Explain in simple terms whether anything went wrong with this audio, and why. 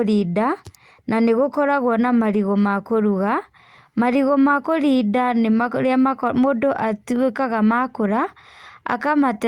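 One short glitch, from 7.65 to 7.71 s. It is a lost packet rebuilt from error correction. About 40 ms of speech went missing, which fits two lost packets. A rougher backup copy in the next packet filled the hole. So there's no silence, just a brief grainy, noisy patch.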